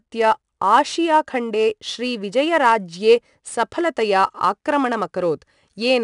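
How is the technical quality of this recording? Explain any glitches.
The recording has one clear problem running the whole way through: 4-bit ADPCM compression. Each sample is coded as a coarse 4-bit step from a prediction, so the error rides along with the level, putting a gritty hiss on louder speech and roughening sharp consonants where the step size lags behind. Nothing comes through above about 10.6 kHz, which points to a reduced sample rate and fits a bitrate around 89 kbps.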